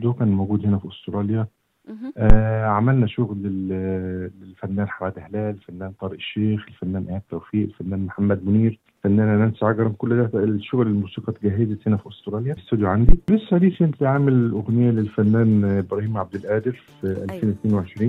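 A deep, abrupt thump hits at 2.30 s and again at 13.09 s, dying away within about 20 ms and 13 ms. This is phantom power thump: a supply switched on or off on a live input, its voltage step passing through the coupling capacitors.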